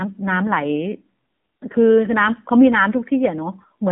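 Thin, boxed-in speech runs the whole way through, with a buzzy, synthetic edge on the voice and nothing heard above 3.6 kHz or below about 150 Hz. The AMR narrowband mobile codec (AMR-NB) explains this: it samples at 8 kHz and rebuilds the voice from a vocal-tract model excited by sparse pulses, and the plainly audible coarseness points to one of its lower modes, consistent with about 7.4 kbps.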